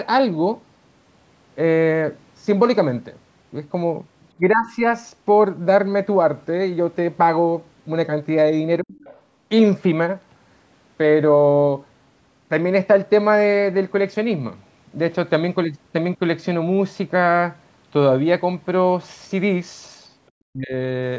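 At 4.42 to 4.83 s, 8.81 to 8.95 s and 20.52 to 20.74 s the talker's speech is suppressed in double talk, most likely an echo canceller ducking the microphone while both sides spoke. The first is a mild dip, the second nearly silences the voice, and the third cuts deep. On the waveform these show as pinched envelope notches, and on the spectrogram as short vertical gaps. From 9.04 to 9.21 s the other side's voice leaks through, a faint scrap about 25 dB below the talker, likely residual loudspeaker echo the canceller missed. It shows as a low-energy smear of separate harmonics just after the second gap.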